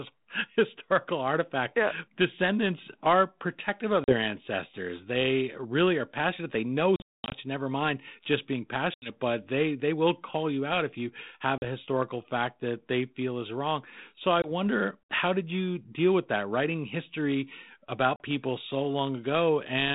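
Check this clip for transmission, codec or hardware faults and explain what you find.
Six short dropouts break the speech, each a hard-edged hole followed by a brief rough re-entry.

Packet loss on an ADPCM call: at 4.04 s (40 ms lost), 6.96 to 7.35 s (300 ms lost, scattered over 360 ms, longest gap 220 ms), 8.94 s (80 ms), 11.58 s (40 ms), 14.42 s (20 ms) and 18.16 s (40 ms). Each sounds like abrupt silence, then speech returning with a trace of distortion that clears within a few tens of milliseconds. The cause is lost packets, from one to about fifteen per event, replaced by silence. ADPCM sends only differences from an adaptive prediction, so the gap leaves the decoder's predictor and step size out of step with the sender's until they re-converge. The G.726 coding itself runs at 32 kbit/s, with light coding noise and no content above 4 kHz.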